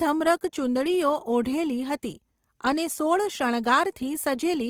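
Throughout the speech, Opus compression is plainly audible: voiced sounds turn grainy and rough, with noisy fill where detail should be. A spectrogram shows energy reaching about 20.4 kHz with few holes, only smeared noise-like texture. The likely cause is music-mode encoding near 24 kbps.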